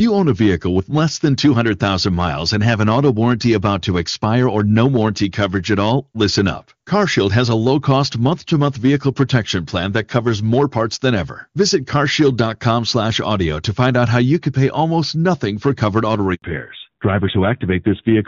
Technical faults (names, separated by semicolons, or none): hard clipping; handover gap; fallback to narrowband